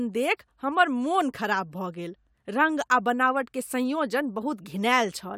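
No technical faults can be heard anywhere in the recording.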